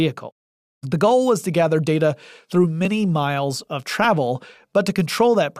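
At 2.85 s and again at 4.04 s, the speech drops out for about 1.3 ms each time. Both are a block of digital silence. A short run of samples was zeroed, which fits a 64-sample buffer that was not filled in time. The waveform drops to silence and back with no fade. With so brief a gap, each one is heard as a tick rather than a hole.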